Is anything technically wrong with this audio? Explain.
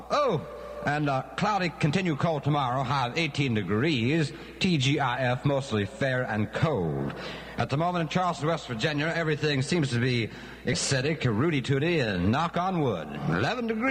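Yes, there is one fault, a stream segment skipped. At 10.72 to 10.75 s the sound jumps abruptly ahead with a short blip, most likely because one chunk of the segmented stream failed to load and playback resumed at the next. The waveform shows a hard discontinuity, and the spectrogram shows a brief vertical broadband line where the content changes without transition.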